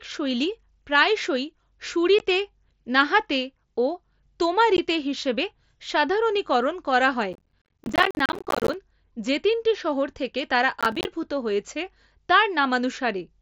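At 2.19 s and again at 4.77 s, just before "হিসেবে সাধারণীকরণ করা হয়", unconcealed Bluetooth headset packet loss leaves a 15 ms hole with abrupt edges. It fits a couple of headset packets that never arrived and were left silent, not patched. Each is a single isolated dropout rather than a run.

From 7.33 to 8.74 s, between "হিসেবে সাধারণীকরণ করা হয়" and "যে তিনটি শহর থেকে", processor overload crackle tears through the speech. Dozens of audio buffers of roughly 10 ms each missed their deadline and were left as silence. This dense train of hard-edged gaps is heard as a gritty crackle, unlike the lone holes earlier. A shorter burst follows at 10.81 to 11.05 s, right after "তিনটি শহর থেকে তারা", with around ten missed buffers.

Beneath all of this sits the faint grain of the mSBC headset link.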